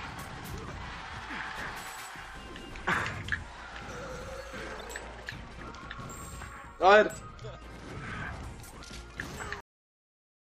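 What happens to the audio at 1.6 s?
Nothing goes wrong at 1.6 s; the audio plays through that moment intact, with no dropout, click or other fault.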